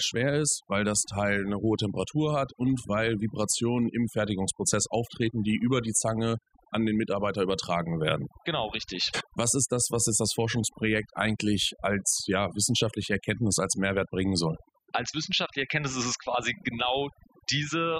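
Throughout, the speech sits over a near-silent background with twinkling specks, the mark of overdone noise removal carving away bands near the estimated noise.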